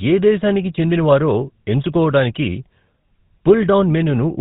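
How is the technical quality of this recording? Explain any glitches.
The recording is poor throughout. The speech sounds buzzy and gravelly, with nothing above 4 kHz. This is the GSM full-rate codec, which fits 13 kbps: a vocal-tract model driven by sparse regular pulses roughens the excitation.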